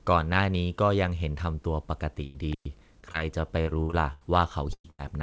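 A burst of packet loss at 2.26 to 2.39 s is the first fault. About 80 ms of the speech never arrived in time. The receiver extended the last sound for roughly 84 ms and faded it down, so the gap is a held buzz or hiss rather than silence. The speech then picks up slightly further along, with the lost stretch simply missing.

Intermittent contact follows at 2.53 to 2.65 s. A loose plug or cable opens the line for about 109 ms. The speech drops out abruptly with crackle at both edges, and only faint hiss remains while the connection is broken, before the signal snaps back.

Short concealed packet loss occurs twice, at 3.01 to 3.19 s and at 3.12 to 3.15 s. Each time about 20 ms of audio failed to reach the decoder. The receiver patched the hole by continuing the preceding sound for around 12 to 14 ms and then blending back into the real speech. The first event also stretches the timing by roughly 15 ms. 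These are heard as brief smears or wobble rather than clear gaps.

Repeated packet loss, producing robotic sound, spans 3.63 to 4.23 s. Four separate losses land within that 0.6 s stretch, the longest about 82 ms, so roughly 37% of the span is concealment rather than real signal. Because each patch barely finishes before the next hole, the speech turns choppy, with pieces dropping out.

Two more bursts of packet loss close the clip. At 4.73 to 4.86 s about 120 ms went missing. Concealment carries on for roughly 113 ms, but the fill decays so far that about 60 ms of it is effectively silent, which makes the gap sound more like a dropout. At 4.90 to 5.00 s another 80 ms is lost and bridged by a fading extension of about 83 ms.

Throughout, the call path cuts off everything above 8 kHz, which fits a wideband codec such as G.722.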